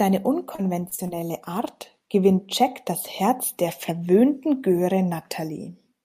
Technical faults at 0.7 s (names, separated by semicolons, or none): repeated packet loss (robotic sound)